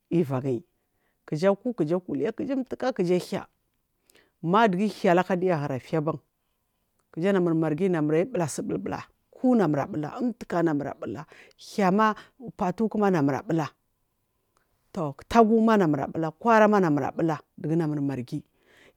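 Nothing in the speech stood out as a technical fault on listening.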